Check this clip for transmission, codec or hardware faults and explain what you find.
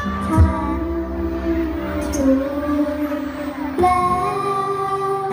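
Nothing here points to a transmission, codec or hardware fault.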